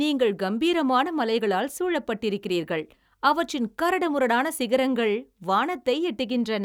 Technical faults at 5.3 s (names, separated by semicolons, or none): none